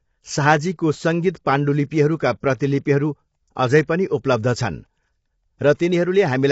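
Throughout, the speech sounds rough and grainy, with noise between the harmonics and nothing above 7.8 kHz, likely from low-delay AAC compression at a low bitrate, consistent with about 24 kbps.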